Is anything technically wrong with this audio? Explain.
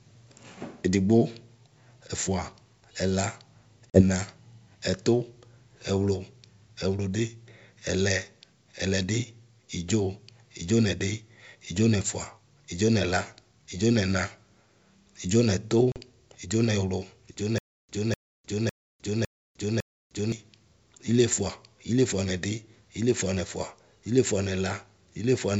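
Yes. The wideband telephone coding (G.722) sounds clean, but the audio has two kinds of fault.

Packet loss on an ADPCM call at 3.90–4.01 s and 15.92–16.01 s: about 40 ms, a couple of packets, is replaced by silence each time. The decoder's predictor and step size lose track of the sender's, so after each sharp-edged hole the speech comes back with brief distortion.

Stutter with silent gaps from 17.58 to 20.32 s: a 250 ms fragment plays five times, each followed by about 305 ms of digital silence, giving an even 555 ms rhythm. The likely cause is a stalled stream replaying its last buffer at each retry. The audio that belonged in that span is lost.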